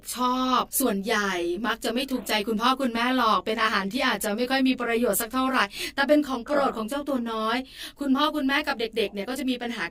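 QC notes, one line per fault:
throughout, channel delay (comb filtering): the speech sounds rough and slightly doubled, with a fixed comb of notches starting low, around 30 Hz, and repeating evenly upward. One channel is late by roughly 20 ms, so summing to mono cancels shared content at those spaced frequencies.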